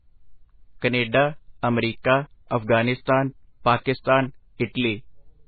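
Throughout the speech, nothing reaches above 4.5 kHz, leaving it dull and watery, with swirling, chirpy s sounds and smeared onsets. A spectrogram shows a hard ceiling and flickering, patchy energy, which points to heavy, likely MP3 compression at roughly 16 kbps.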